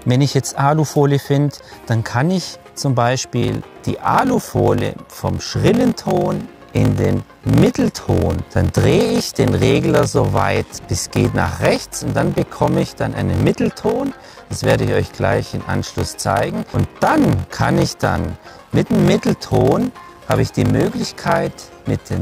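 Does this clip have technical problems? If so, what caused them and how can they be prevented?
Yes. A block size mismatch (padded) runs from 3.40 s to the end. Each 1024-sample read is only partly filled, with zeros padding the rest, giving a 46.9 Hz buzz and slowing the sound to 0.861 speed with the timbre kept. Matching block sizes between stages prevents it.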